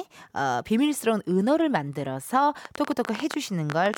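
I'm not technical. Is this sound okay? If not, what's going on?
No. From 2.65 s to the end at 3.98 s, a train of clicks, around fifteen uneven ticks about 11 per second, pops over the speech, likely from electrical interference or a faulty connection or power supply.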